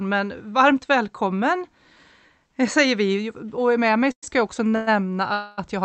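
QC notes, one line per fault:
4.11–4.25 s, 4.76–4.89 s and 5.33–5.60 s, call audio freeze: the sound hangs on a fading buzz or hiss for about 0.11 s, 0.11 s and 0.25 s, and the first one drops to about 80 ms of silence. This is likely a jitter-buffer underrun from held-up packets. Playback then resumes where it stopped, so a gap is inserted and nothing is lost.
4.71 s, short stall from a late packet: the last sound is held about 23 ms too long, with a slight buzz or dip, before playback continues from the same point with nothing missing. This comes from a packet arriving after its due time and the buffer briefly running dry. It leads directly into the second freeze.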